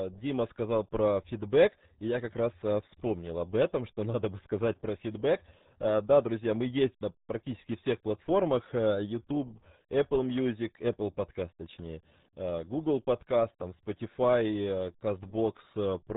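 From start to finish the speech carries the RealAudio 14.4 codec's signature: nothing survives above about 3.9 kHz, leaving it muffled, and heavy coding damage adds a gargly, watery texture to every syllable, consistent with a roughly 8 kbit/s dial-up-era speech coder.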